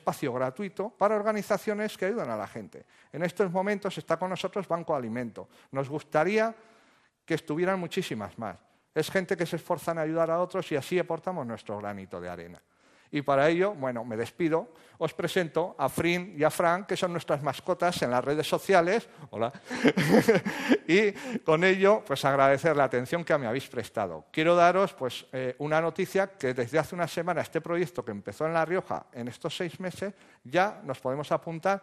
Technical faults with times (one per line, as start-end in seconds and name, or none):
0.00-31.82 MP2 compression